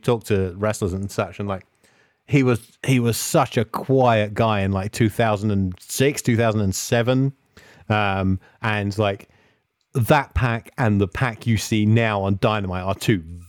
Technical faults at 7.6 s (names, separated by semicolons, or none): none